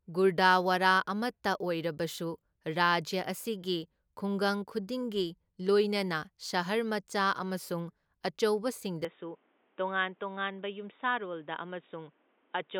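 Speech that, from 9.05 s to the end, turns dull and boxy, with nothing above 3.8 kHz, a level drop of roughly 5 dB, a faint new noise floor and no gap at the change. This is likely an input switched to a poorer device. A spectrogram shows the upper band abruptly cut off there, and the waveform steps down in amplitude.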